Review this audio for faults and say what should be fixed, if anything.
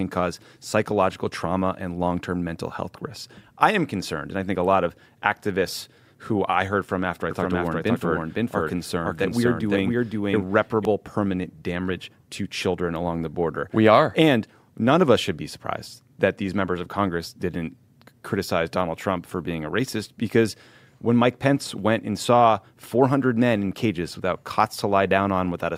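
From 7.31 to 10.85 s, after "heard from after I" and before "permanent damage to children", a doubled audio track appears: the speech repeats about half a second late, at roughly equal loudness, with no room colour. Likely cause: a second, slower capture path or an edit holding two offset copies.

To prevent it, route each source through a single capture path and check edits for overlapping duplicate regions.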